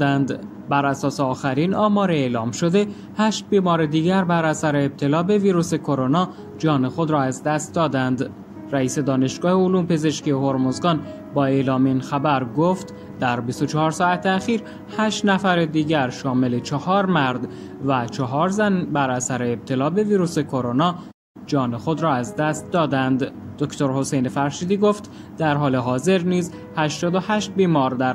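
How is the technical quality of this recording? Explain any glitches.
There's one glitch. At 21.11 to 21.36 s there's a playback stall: the sound cuts to silence for about a quarter second, likely because the player ran out of buffered data, then resumes.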